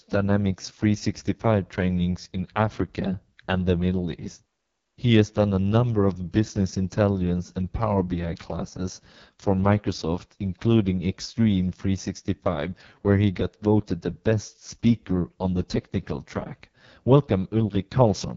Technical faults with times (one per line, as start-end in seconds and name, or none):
0.00-18.37 AMR wideband (HD Voice) codec